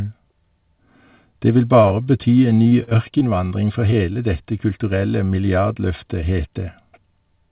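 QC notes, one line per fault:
1.82 to 1.86 s, 1.88 to 1.92 s, 2.04 to 2.08 s: short stall from a late packet, three times in quick succession. Each time a packet arrived late and the jitter buffer ran dry. The receiver held the last sound for about 19, 21 and 23 ms, then resumed where it had paused. Nothing is lost. The sound simply drags for a moment, with a faint buzz or dip. Each stall pushes playback later by its own length.
2.50 to 3.53 s: repeated packet loss (robotic sound). Over this second, packets went missing or late seven separate times. The longest hole was 43 ms. Each gap was patched by extending the previous sound, and the next gap arrived soon after. About 14% of the stretch is filled in this way, and about 100 ms of real audio never plays. The result is choppy, with small pieces missing.
3.91 to 3.99 s and 4.13 to 4.17 s: short concealed packet loss, twice. Each time about 20 ms of audio failed to reach the decoder in time. 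The receiver bridged the hole by carrying the last sound forward, then blended back into the real signal. The first event adds roughly 10 ms of delay. Both events are heard as a brief smear or wobble, and a quick consonant may vanish. The narrow call-path sound, with nothing above 4 kHz, fits a G.711 codec.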